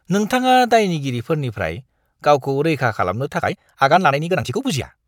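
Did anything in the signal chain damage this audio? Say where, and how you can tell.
Yes. A time-stretching stage, likely in editing or playback software fitting the audio to a shorter length, compressed the speech from 3.34 s to the end of the clip at about 1.72 times normal speed. The pace jumps abruptly while the pitch stays where it was. To hold the pitch, the process drops short pieces of the waveform, so this time-stretched section sounds rushed.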